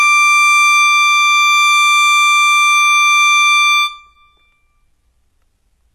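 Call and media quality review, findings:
HE-AAC compression, whole clip, plainly audible. Treble on this music stops dead at 12.4 kHz; the band below that sounds bright but synthetic, with gritty, metallic cymbal and sibilant texture. Likely component: sender encoder at a very low rate, consistent with roughly 16 kbps. Mechanism: only the lower spectrum is coded; the top end is rebuilt by spectral band replication under a coarse envelope, so upper harmonics misalign across the crossover.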